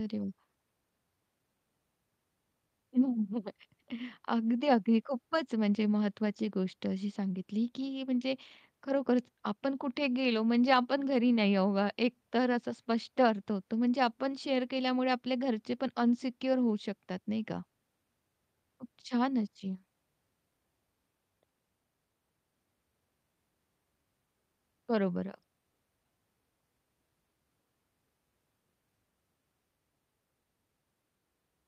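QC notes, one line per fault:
Nothing stood out on listening to this speech recording.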